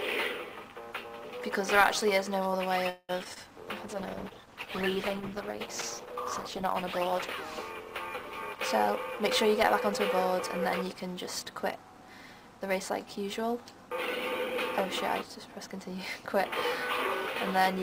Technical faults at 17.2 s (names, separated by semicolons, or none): none